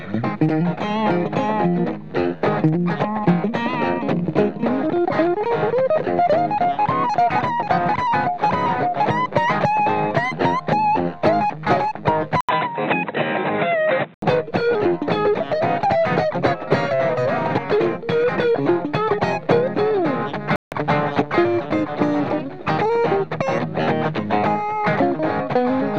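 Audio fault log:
12.41–14.22 s input switched to a poorer device: likely a narrower-band microphone took over. After an 80 ms gap the sound loses everything above 4 kHz and gains faint new background noise.
20.56–20.72 s digital broadcast dropout: the receiver lost valid frames and muted, leaving a 160 ms silent hole, which fits about five dropped frames, before sound resumes.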